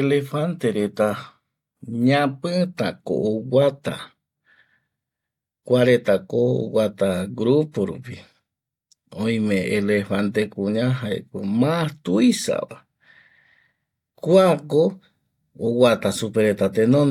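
There are no technical faults to describe at any point in this recording.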